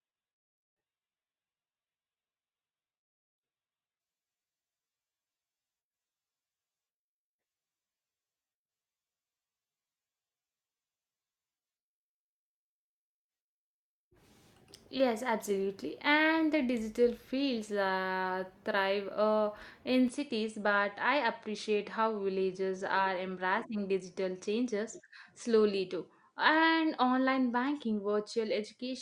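Speech, with two distinct faults. For the first 4.0 s the adaptive stream is starting at a low bitrate. The treble is thin and partly synthetic, and coding artefacts are strong, which points to a very low Opus setting of around 12 kbit/s. At 4.0 s the quality jumps with no gap to something nearer 64 kbit/s. On a spectrogram the upper bands are sparse and smeared until 4.0 s, then fill in abruptly across the full height. From 20.08 s to the end the tone turns duller and boxy, with no silence at the change. The likely cause is the input being switched to a poorer device. The spectrogram shows a hard ceiling at 10.5 kHz from that point. The waveform envelope steps down by about 5 dB, and a faint new noise floor sits far below the speech.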